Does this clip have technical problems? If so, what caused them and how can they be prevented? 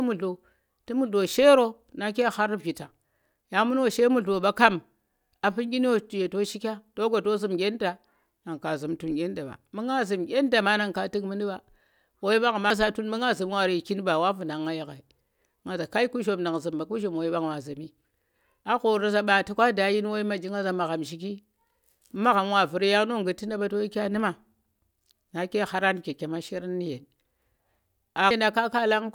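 Yes. The speech carries damaged data in a compressed stream at 12.70 s and again at 28.31 s, each a brief chirp or blip. Corrupted bytes in the encoded file make the decoder misread those frames and lose sync until it finds the next frame header. On a spectrogram each appears as a thin vertical streak of broadband energy, and on the waveform as a short, abrupt break in the signal's shape. Verifying checksums during transfer and storage, and keeping metadata out of the audio payload, would prevent it.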